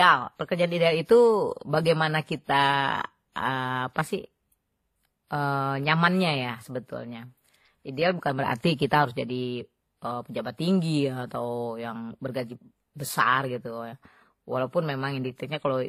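A speech recording that has likely been through transcoding between lossy codecs, with a low-rate HE-AAC-style encode followed by a WMA encode at a higher rate. The second codec spends its bits re-describing the first one's damage instead of removing it, so the smeared, swirly texture of a very low-bitrate spectral-replication codec runs through all the speech, overlaid with WMA's own coding grain, and nothing is present above 14.9 kHz.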